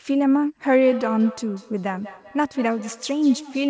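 Speech carrying feedback echo between two devices from 0.79 s to the end. Each phrase returns roughly every fifth of a second, thinner and ringing, peaking about 17 dB below the voice, as a second nearby device replays the call into a microphone whose echo canceller only removes its own output.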